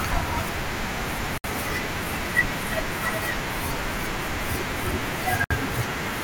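The speech drops into brief silences at 1.38–1.44 s and 5.44–5.51 s, each about 64 ms, four seconds apart, with smeared edges before resuming where it stopped. These are gaps at joins of encoded pieces, where each piece's encoder delay and final-frame padding were never trimmed.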